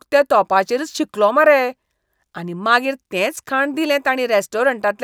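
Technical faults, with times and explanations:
Nothing technical stands out in this bit of speech, so there's no fault to list here.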